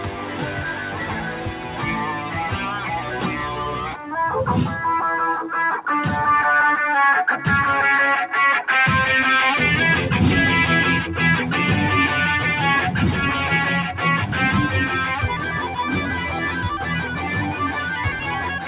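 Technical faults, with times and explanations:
Throughout: noise suppressor applied to music or sounds. A speech-tuned suppressor keeps treating sustained tones, ambience and decays as noise, so the level swings by around 10 dB. Attacks pass while held parts sink, which gives pumping and thinning. Unlike a compressor, the dips follow steadiness rather than loudness.
0.00–1.87 s, 2.09–2.37 s, 2.53–4.13 s: sound cut by the noise suppressor. In these spans, steady or fading material drops by about 7 dB at most in the first span and about 6 dB in the others, and tails are cut short. Onsets survive. These are level sags, not the silent gaps of dropouts. The narrow band, with nothing above 4 kHz, fits a normal G.711 A-law call path.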